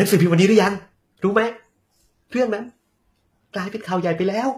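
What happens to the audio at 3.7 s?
At 3.7 s the speech carries the same damage heard throughout: sibilants sound gritty and lispy, with a metallic treble. That points to likely HE-AAC compression at a low rate near 24 kbps, the treble rebuilt from copied lower bands. A spectrogram shows repeated, blocky high-frequency patterns above a sharp crossover.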